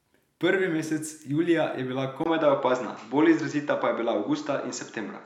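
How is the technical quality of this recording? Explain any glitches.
The quality drops partway through. At 2.24 s, after "mesec julija je bila", the input likely switched to a poorer device. A 20 ms gap follows, then nothing above 7.6 kHz, a level shift of around 5 dB, and faint new noise.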